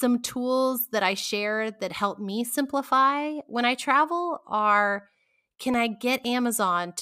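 From 5.74 to 6.49 s, just after "I travel are can", come CD scratch ticks: four brief clicks about four times a second, each only a few milliseconds, where a disc blemish defeated error correction once per revolution. A spectrogram shows evenly spaced thin vertical broadband lines; the waveform shows tiny spikes or gaps.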